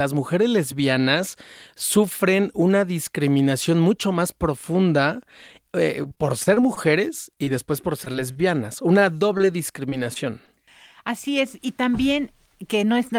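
Right after "mucho más profunda eh", from 6.03 to 8.37 s, the speech turns choppy as fragments drop out in quick succession. This is repeated packet loss (robotic sound). More than a dozen holes open up, the longest 38 ms, with 160 ms of audio missing in total. The receiver covers each one by stretching the preceding sound, giving 260 ms of patched audio, about 11% of the stretch.

From 8.99 to 10.49 s the speech stays largely clear but carries a handful of brief ticks and small hiccups. These are scattered short gaps: roughly five isolated packets went missing or arrived late, 80 ms of audio in all, none much longer than about 20 ms. Each hole was filled by continuing the last sound, around a tenth of a second of concealment altogether, a small share of the stretch.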